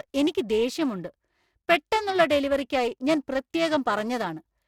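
Throughout the speech, periodic clock jitter at about 500 Hz wobbles the converter's sample timing, adding a rough, metallic edge that disappears in pauses. A spectrogram shows sidebands roughly 500 Hz either side of each harmonic, strongest among the upper frequencies.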